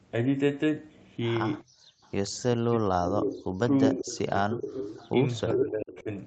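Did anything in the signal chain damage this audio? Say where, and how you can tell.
Yes. The faults all sit in the call processing stage, in the echo canceller.

Echo leak appears twice, from 1.62 to 2.09 s and from 3.59 to 6.03 s. A second copy of the speech trails the original by 391 ms. In the first stretch it is faint, about 40 dB down. In the second it is strong, only about 10 dB below the speech. The likely cause is a loudspeaker on one side whose echo canceller let part of its microphone pickup through and sent it back into the call.

Background gated by the echo canceller shows from 1.64 to 2.02 s. The room sound drops by as much as about 40 dB for roughly 0.4 s, then comes back. The canceller pulled its microphone down hard while its loudspeaker was playing and released it once playback stopped. That is why the background dips and returns within the same window as the faint echo.

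Speech suppressed in double talk runs from 2.66 to 6.09 s. The talker's speech is turned down, with drops of roughly 30 dB adding up to about 2 s in total. This is likely the canceller failing to tell its own talker from the loudspeaker echo while both sides spoke at once, so it attenuated both. The strong leak from 3.59 s overlaps this stretch.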